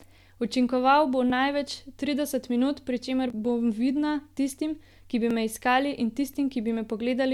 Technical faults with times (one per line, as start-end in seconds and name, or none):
1.30-5.30 periodic USB or driver dropouts